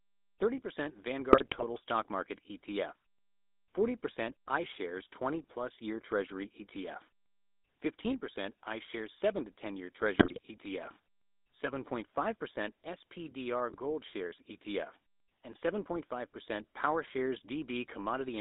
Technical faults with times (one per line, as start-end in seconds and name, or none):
0.00-18.41 GSM full-rate codec
1.32-1.65 GSM bit errors
10.18-10.40 GSM bit errors
13.70-13.76 GSM bit errors